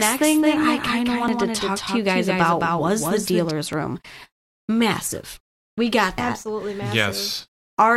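A speech clip with two separate problems layered over each other. From the very start until 3.51 s there's a doubled audio track: a second full-band copy of the speech trails the original by roughly 200 ms, only about 5 dB quieter, with no reverb tail or room colour. That's most likely the same signal being picked up twice, with one path slower, and the copy cuts out abruptly at 3.51 s rather than fading. On top of that, there's audio missing between chunks at 1.28 s, 3.73 s and 6.18 s. At each point a short bit, around 50 ms, simply isn't there, and the two sides butt together with no gap, so you hear a skip. The steady spacing points to a recorder or processor likely working in 2.5-second chunks and dropping a sliver at each handover.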